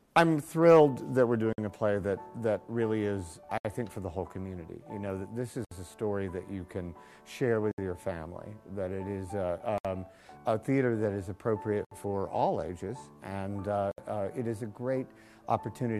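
Gap at a join of encoded pieces at 1.53, 3.58, 5.65, 7.71, 9.78, 11.85 and 13.91 s: pieces encoded separately keep their start delay and end padding, so 50 ms, then 67 ms, silences cut the sound roughly every 2 s.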